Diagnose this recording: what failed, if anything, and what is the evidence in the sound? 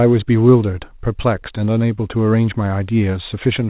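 Nothing in this recording failed: the speech arrives intact over the WebRTC call path, with the band stopping at 4 kHz as expected of a narrowband telephone channel, which points to G.711 mu-law coding at 64 kbps.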